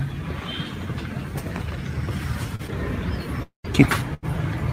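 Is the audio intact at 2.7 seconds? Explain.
No. Two kinds of fault meet there. Short concealed packet loss runs from 2.67 to 2.71 s, just after another from 2.55 to 2.62 s. Audio arrived too late, and the receiver extended the preceding sound to cover it before blending back. That gives a brief smear or wobble.

Inside that span, from 2.68 to 2.70 s, a lost packet is rebuilt from error correction. The decoder played a 20 ms low-bitrate copy carried by the next packet. That segment sounds rougher and noisier than its surroundings.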